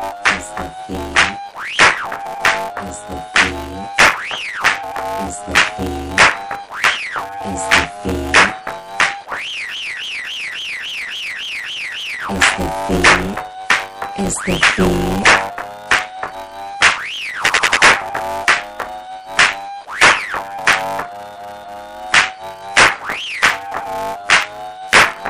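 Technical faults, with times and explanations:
Throughout: buffer tearing. A rough, robotic buzz at 100 Hz rides on the sound wherever there is signal and vanishes in the gaps. The writer and reader of the playback ring buffer have drifted so they cross inside each 10 ms period. About two fifths of every period carries audio from roughly 20 ms earlier, butted against current audio with hard joins. Unlike mains hum, it follows the signal rather than sitting underneath it.
9.69–12.19 s, 17.44–17.81 s, 21.34–21.90 s: repeated frames. The same stretch of audio is replayed back to back. At 9.69 s a 278.6 ms block plays nine extra times, adding about 2.5 s. At 17.44 s a 92.9 ms block repeats four extra times, adding about 0.37 s. At 21.34 s a 278.6 ms block repeats twice more, adding about 0.56 s. The block lengths fit runs of several compressed frames. Unlike the steady tearing buzz, each copy is an identical chunk of whole audio, so these passages are heard as stutters and the clip runs longer.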